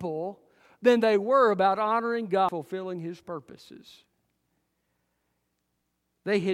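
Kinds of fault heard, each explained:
Damaged data in a compressed stream: at 2.49 s, just after "they were about honoring", a brief blip breaks into the speech. Corrupted bytes in the encoded stream made the decoder misread that frame, lose sync and search for the next valid frame header.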